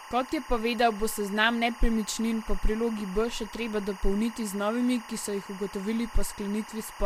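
From start to finish there's timecode bleed sitting under the speech: linear timecode from a nearby track or cable has leaked into the audio path. That code is a square wave flipping between two pitches an octave apart, here around 1 kHz and 2 kHz, running at 23.976 frames per second. You hear it as a constant chirpy warble behind the talking, roughly 20 dB down from the speech.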